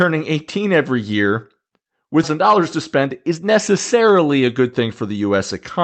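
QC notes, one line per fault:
2.23 to 2.25 s, skip ahead: about 0.7 s of speech is missing. It was dropped and both sides were joined directly, with no gap.
2.35 to 5.17 s, jitter buffer speed-up: speech runs at 110% speed but keeps its pitch. Repeated pitch-period cuts remove about 0.3 s, so it sounds hurried.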